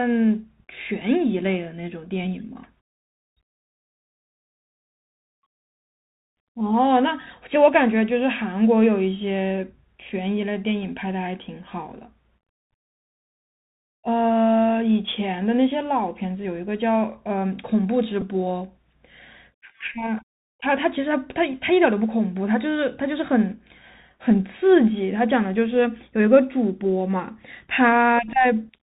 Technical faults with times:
0.00-28.82 Bluetooth CVSD headset codec
18.21 Bluetooth headset packet repeated

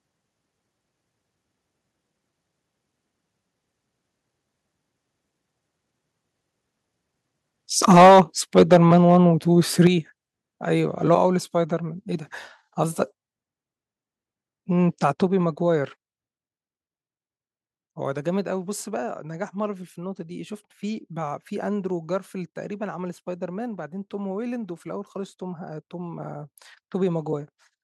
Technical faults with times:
7.90-8.21 microphone overload
7.92 microphone volume stepped down
8.56-9.17 microphone overload
9.85 microphone overload
9.87 microphone volume stepped down
15.27 microphone volume stepped down

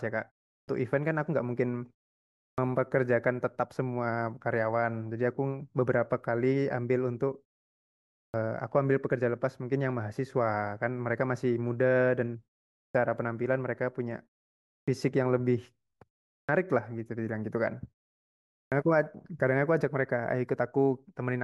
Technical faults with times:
0.58-0.68 clipped start after a pause
2.47-2.58 clipped start after a pause
8.23-8.34 clipped start after a pause
12.84-12.95 clipped start after a pause
14.77-14.88 clipped start after a pause
16.37-16.49 clipped start after a pause
18.61-18.72 clipped start after a pause

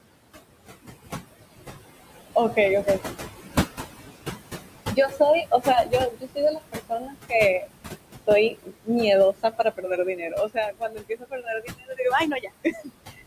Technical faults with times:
0.00-13.27 noise suppressor artifacts
2.53-3.11 speech cut by the noise suppressor
4.91-7.67 speech cut by the noise suppressor
8.27-8.89 speech cut by the noise suppressor
9.32-12.00 speech cut by the noise suppressor
12.40-12.90 speech cut by the noise suppressor

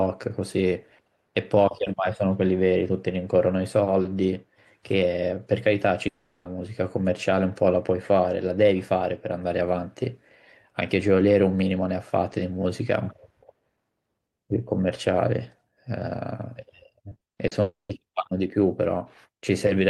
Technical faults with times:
6.07-6.47 long network dropout
17.09-17.53 repeated packet loss (robotic sound)
17.61-17.91 long network dropout

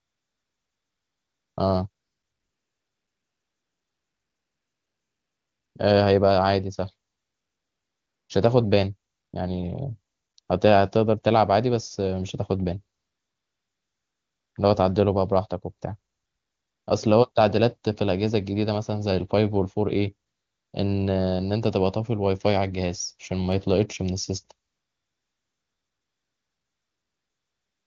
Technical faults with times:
0.00-1.57 AMR comfort noise
1.89-5.75 AMR comfort noise
7.11-8.29 AMR comfort noise
9.11-9.33 AMR comfort noise
10.13-10.49 AMR comfort noise
12.97-14.55 AMR comfort noise
16.13-16.87 AMR comfort noise
17.31-17.35 AMR comfort noise
20.29-20.73 AMR comfort noise
24.67-27.86 AMR comfort noise

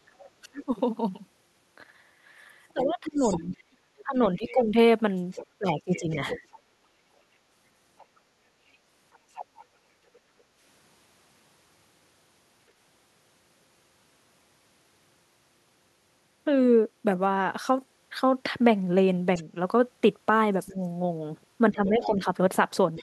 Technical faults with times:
0.06-0.14 background gated by the echo canceller
0.18-10.19 other side's voice leaking through
0.42-6.48 speech suppressed in double talk
6.76-6.82 background gated by the echo canceller
10.20-10.58 background gated by the echo canceller
19.35-23.03 other side's voice leaking through
19.44-23.03 speech suppressed in double talk

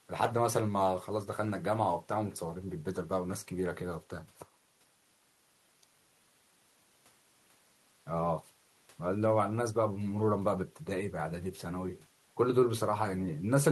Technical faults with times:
none

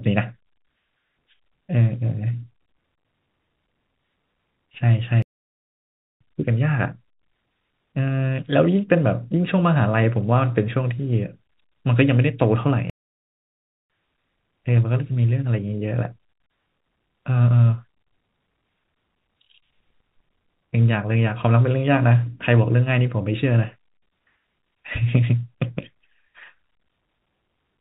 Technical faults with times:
5.22-6.21 playback stall
12.90-13.90 playback stall

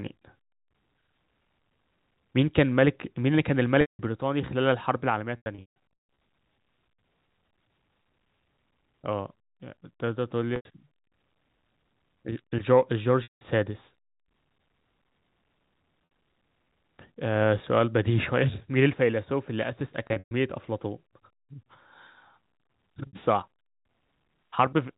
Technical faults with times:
3.81-3.99 packet loss with pitch repetition
5.37-5.76 packet loss with pitch repetition
10.56-10.65 packet loss with pitch repetition
13.23-13.41 packet loss with pitch repetition
16.05-16.11 packet loss with pitch repetition
20.07-20.31 packet loss with pitch repetition
23.07-23.13 packet loss with pitch repetition

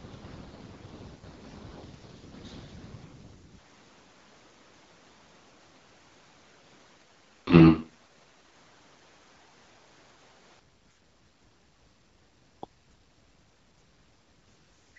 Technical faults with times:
3.58-10.59 switch to a distant microphone
7.47-7.82 AMR rate drop
14.45-14.97 AMR rate drop

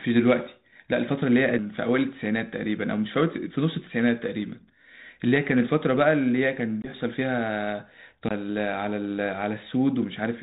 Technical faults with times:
6.82-6.90 packet loss on an ADPCM call
8.28-8.31 CD skip

